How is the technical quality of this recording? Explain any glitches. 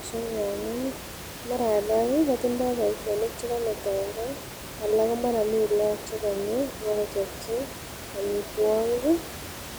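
The recording contains no audible glitches or faults.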